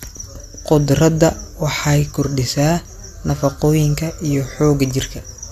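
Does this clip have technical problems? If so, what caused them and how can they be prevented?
No, nothing in this recording points to a technical problem, so there is no cause to trace and nothing to prevent.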